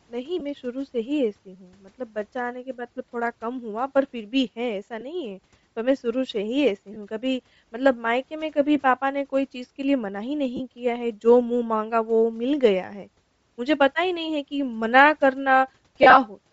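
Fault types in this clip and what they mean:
Bluetooth LC3 compression: the speech has a breathy, grainy top end with noise-filled upper bands throughout, likely from LC3 coding at a low rate near 32 kbps.
Lost LE Audio frames: brief gaps concealed by repeating the previous spectrum with scrambled signs, heard as short noisy smears, worst around 16.0 s across about 135 ms.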